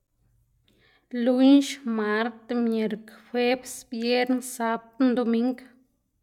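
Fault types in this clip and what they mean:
No faults can be heard in this recording.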